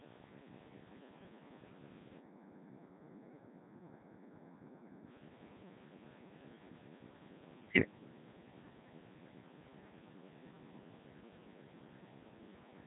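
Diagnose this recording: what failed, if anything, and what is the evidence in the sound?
The failure is at the codec stage, and it runs the whole way through. The speech has that robotic, buzzy quality of the Codec 2 vocoder, with nothing above 3.8 kHz. Codec 2 doesn't keep the waveform. It sends only pitch, voicing, energy and a rough spectral envelope, and the decoder rebuilds the voice from sine waves. The damage here is heavy, which fits a very low rate of about 1.6 kbit/s.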